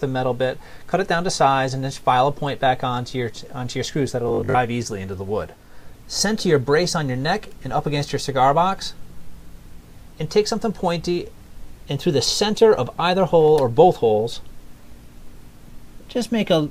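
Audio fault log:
4.29–4.59 s, robotic sound from repeated short buffers: the sound turns into a rigid, metallic buzz pinned at 50 Hz, tracking the underlying audio only loosely for about 0.3 s. The likely cause is that fresh audio arrived too slowly and playback filled the gaps by looping the most recent fragment. A 50 Hz buzz means each repeat lasted 20 ms, which fits a 20 ms buffer. Roughly half of this stretch is repeated material, with the missing audio skipped.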